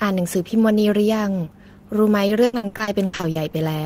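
From 2.27 to 3.55 s the speech breaks up with repeated packet loss, giving a robotic sound. About a dozen short holes fall across this stretch, none longer than about 80 ms. Each one is patched by stretching the last bit of sound forward, and the next hole arrives soon after. Nearly 40 percent of the stretch is this filler, about half a second in total. The speech turns choppy, with pieces missing.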